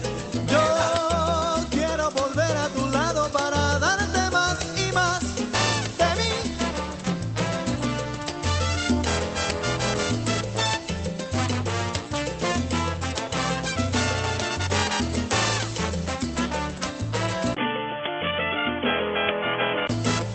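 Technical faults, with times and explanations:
17.55–19.89 s, likely input switched to a poorer device: sound turns boxy with nothing above 3.4 kHz, a 20 ms gap; spectrogram goes dark above, waveform level unchanged.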